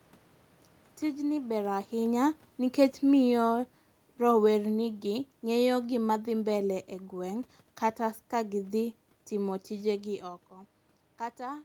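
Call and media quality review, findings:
Automatic gain falling, 1.49 to 3.65 s: level sinks by about 4 dB over roughly 2 s, room noise dropping with it, so AGC is backing off after loud input or strong background noise. Waveform envelope tapers steadily; spectrogram darkens uniformly across all bands, noise floor included, near the talker shift around 1.5 s.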